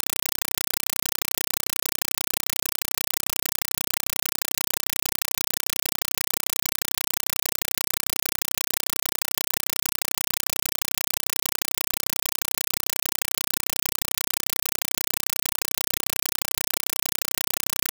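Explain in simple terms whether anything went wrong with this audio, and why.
Yes. From start to finish, instead of speech you get loud, harsh, chattering static: a compressed stream played as audio. The Dolby Digital (AC-3) data was sent as if it were ordinary sound, and nothing decoded it. Each packed frame comes out as a short blast of noise, about 5.33 ms long, followed by silence, repeating 31.25 times a second. That steady stutter is the rattle you hear, and the speech itself never comes through.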